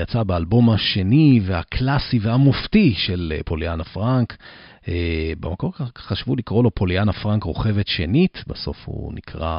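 A recording of speech, with nothing technically wrong to report. No fault can be heard anywhere in the audio, so there are no times or causes to give.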